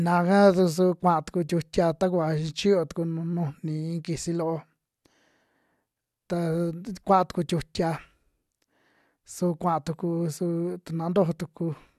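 Nothing technical gets in the way of this speech recording; there's no dropout, glitch or distortion to point to anywhere in it.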